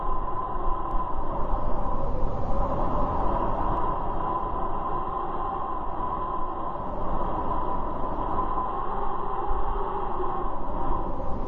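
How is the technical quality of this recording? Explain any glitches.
There's one clear glitch. From 0.91 to 3.77 s you get a doubled audio track: a second full-band copy trailing roughly 0.7 s behind, around 10 dB quieter, with no room colour. It likely came from a slower capture path, and it cuts in and out abruptly.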